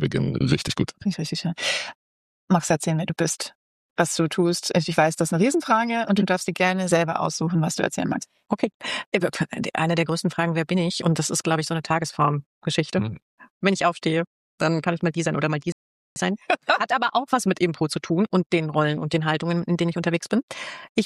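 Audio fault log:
15.72–16.16 s rebuffering stall: the player ran out of downloaded audio and waited for more, so sound falls silent for 0.44 s, then resumes exactly where it stopped.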